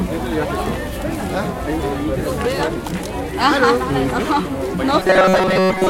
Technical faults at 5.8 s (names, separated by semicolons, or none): robotic sound from repeated short buffers